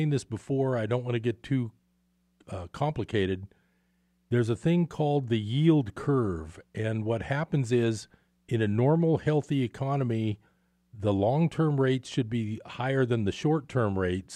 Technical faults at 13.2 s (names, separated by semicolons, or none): none